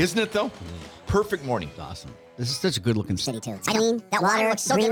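From 3.26 s to the end, the audio suddenly turns higher and hurried: a section at the wrong speed, 1.52 times too fast and about seven semitones up, likely from playback at a mismatched clock.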